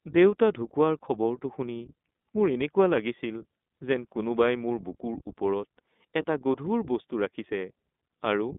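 From start to finish the speech carries iLBC codec damage: the band is held to roughly 200 Hz to 3.6 kHz, and each short frame is coded independently, leaving a plainly audible rough, synthetic texture that fits 20 ms frames at 15.2 kbps.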